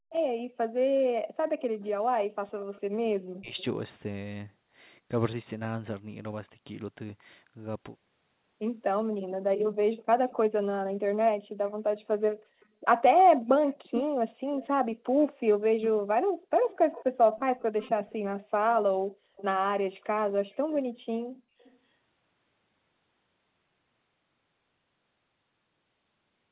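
A speech recording carrying echo-canceller faults at the start and again around 1.6 to 3.6 s. From 0.0 to 0.09 s the background is gated by the echo canceller: the room tone is pushed down by about 40 dB while the far end's loudspeaker is active, then released. On a spectrogram it is a brief dark vertical band where the faint broadband noise floor vanishes, then reappears abruptly. Immediately after, from 0.09 to 0.13 s, and then for a longer stretch from 1.59 to 3.64 s, there is an echo leak. A faint delayed copy of the speech trails the original by 243 ms, at roughly 25 dB below it, most likely because the far side's canceller failed to remove everything its microphone caught from its loudspeaker. On a spectrogram this shows as a ghost of the harmonic pattern, much weaker and shifted right by about a quarter second. The waveform shows small, smeared bumps filling the gaps after syllables. 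Inside that stretch, from 3.3 to 3.57 s, the speech is suppressed in double talk. The talker's level collapses by something like 40 dB for about 300 ms, likely because both ends spoke at once and the canceller attenuated the near talker along with the echo. The waveform envelope pinches to almost nothing there, and the spectrogram goes dark across the band. All of this sits within a band that stops at 4 kHz, which points to a narrowband G.711 call path.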